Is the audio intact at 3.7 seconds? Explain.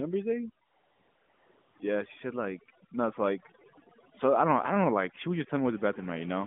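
No. Overdone noise removal affects the whole clip, including 3.7 s. Set too strong, it switches off single frequency bands near its noise estimate, so quiet parts of the voice vanish, leaving near-silent, twinkling gaps. Those isolated specks distinguish it from the swirling warble of a starved mobile codec.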